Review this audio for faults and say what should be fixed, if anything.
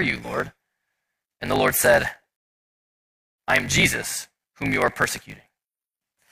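A block size mismatch (truncated) runs throughout. A 50 Hz buzz marks each block, and speech plays 1.16 times fast. The lost ends fit 1024-sample written blocks. Fix it by matching the block sizes between stages.

A rebuffering stall silences the speech from 2.36 to 3.38 s. It resumes intact at "I am" and adds 1.18 s. Fix it by buffering more audio before playback.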